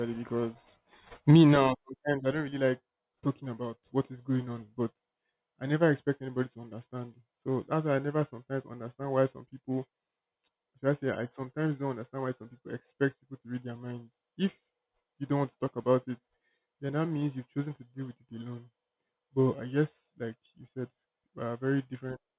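Speech recording with nothing technically wrong with it.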